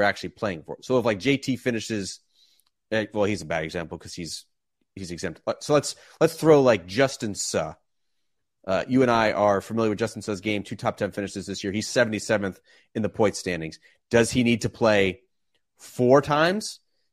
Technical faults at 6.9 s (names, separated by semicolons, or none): none